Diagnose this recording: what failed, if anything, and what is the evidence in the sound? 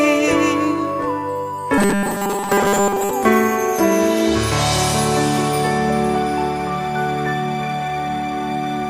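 Robotic sound from repeated short buffers, 1.78 to 3.11 s: a rigid 200 Hz buzz that follows the contour, unlike steady mains hum. Likely a starved driver buffer looping 5 ms chunks.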